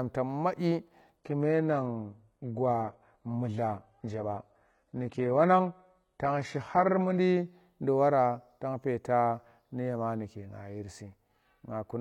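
From 1.17 s to 7.17 s the speech switches abruptly, with no gap, to an adaptive stream at a lower bitrate, as the player falls back to a cheaper rendition. Nothing above 11.8 kHz remains and codec artefacts rise, which fits a drop from 96 kbit/s AAC-LC to 16 kbit/s HE-AAC.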